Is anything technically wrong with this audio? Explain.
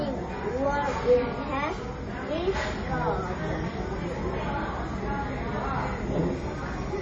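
Yes. Heavy MP3 compression runs throughout the clip, likely from a low-bitrate encode. With too few bits, the encoder trims the treble and drops quieter frequency lines that flicker between frames, leaving a watery, swirling texture, metallic chirps and smeared attacks. This damage fits roughly 32 kbps.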